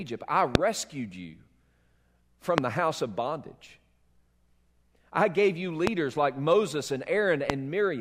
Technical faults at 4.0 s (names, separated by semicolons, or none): none